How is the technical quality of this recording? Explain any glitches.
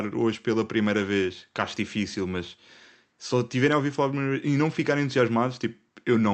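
Nothing goes wrong here: the speech comes over the call link steadily, with the top end stopping around 8 kHz as that connection was set up to do, and there are no glitches to point to.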